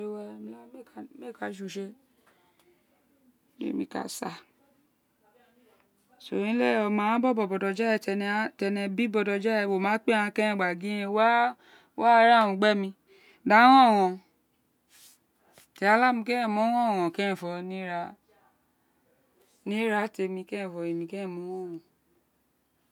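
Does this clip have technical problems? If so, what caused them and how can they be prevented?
No, this clip has no technical problems, so there is nothing to trace to a cause or to prevent.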